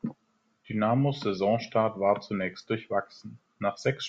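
No technical faults can be heard anywhere in the recording. There is nothing to place on a timeline, so no event needs a time or a cause.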